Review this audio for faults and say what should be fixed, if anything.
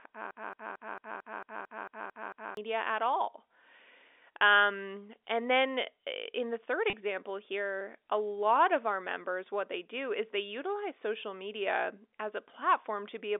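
A broken-record loop runs from 0.31 to 2.57 s, ending just before "at all". A 224 ms fragment repeats exactly, back to back, ten times. The sound that belonged in that span is gone. A stalled player or stream buffer is the likely cause.

Packet loss with pitch repetition occurs at 4.39 s and again from 6.90 to 6.93 s, between "eh in the third" and "here a lot of". Each gap covers about 30 ms. The receiver bridges it by repeating the last pitch period, so the speech holds briefly with a slight buzz. The narrow telephone band of the G.711 line sits underneath both events.

Adding buffer-underrun detection to the player, and forward error correction or a larger jitter buffer on the link, would prevent these faults.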